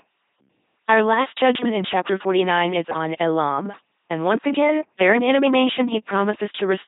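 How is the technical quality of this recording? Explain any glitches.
Poor: the speech has passed through an LPC-10 vocoder throughout. Each frame is rebuilt as pure buzz or pure hiss through a ten-pole filter, with nothing above 3.8 kHz. This gives a mechanical, robotic timbre fitting roughly 2.4 kbit/s, with no natural voice left, unlike merely band-limited telephone audio.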